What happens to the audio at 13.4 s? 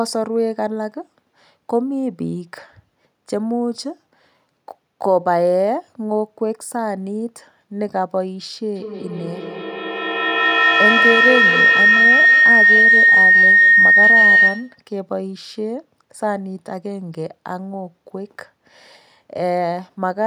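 At 13.4 s the speech is joined by a feedback howl lasting from 8.75 to 14.89 s. Sound re-enters a microphone from a nearby loudspeaker and gains level on each pass, so unlike echo the repeats grow rather than fade, narrowing to a tone around 2 kHz, with repeats about 200 ms apart, that peaks about 8 dB above the speech.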